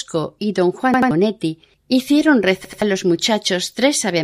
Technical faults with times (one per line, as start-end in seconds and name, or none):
0.94-1.11 repeated buffer
2.65-2.82 repeated buffer